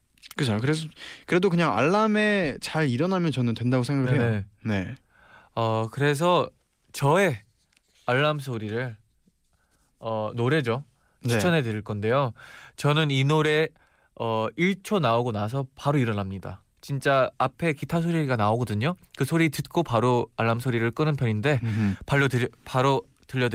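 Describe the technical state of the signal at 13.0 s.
At 13.0 s the signal is intact, with no audible fault at that moment.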